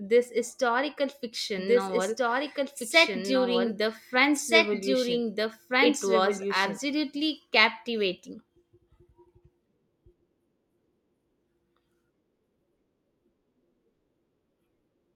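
A doubled audio track runs from 1.58 to 6.78 s in this speech recording: a second full-band copy of the same speech trails the original by about one and a half seconds, at roughly equal loudness, with no decay or room colouring. It cuts in and out abruptly at those points. The likely cause is the signal being captured twice, once through a slower path, or an edit leaving two offset copies.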